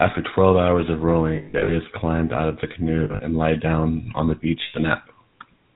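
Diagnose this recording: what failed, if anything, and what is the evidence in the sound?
Stage is the codec. The whole clip has that buzzy, gravelly GSM full-rate character, plainly audible, with nothing above 4 kHz, consistent with a 13 kbps full-rate link. It models the vocal tract and drives it with evenly spaced pulses, keeping only every third excitation sample, hence the roughness.

Then there are lost GSM frames, which point to the transmission side feeding that codec. They sit at 1.36 to 1.77 s, 3.04 to 3.21 s and 4.62 to 4.75 s, each heard as a rough, metallic ring. The decoder repeats the last good frame's settings at falling level. At 1.36 s about 240 ms drops out across 320 ms, with the longest run around a tenth of a second, and 3.04 s loses about 120 ms.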